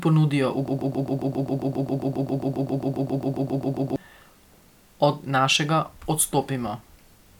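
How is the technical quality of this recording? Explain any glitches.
The recording has one serious glitch. From 0.68 to 3.96 s, a broken-record loop: playback likely stalled and resent its last fragment, so a 0.13 s snippet of speech repeats 24 times, replacing the missing audio.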